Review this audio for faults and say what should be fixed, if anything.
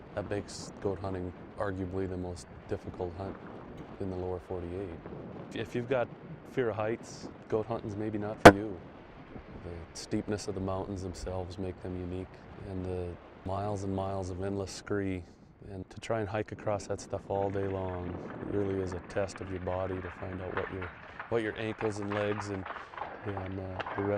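Two brief chirp-like bursts break into the sound: a faint one from 3.76 to 3.80 s and a much louder one from 8.45 to 8.54 s. These are corrupt frames decoded. Flipped bits in a few compressed frames led the decoder to misread gains and codes, spraying energy into wrong frequencies for each damaged frame's length. Check frame integrity in transport and have the decoder conceal or drop frames that fail the check rather than play them.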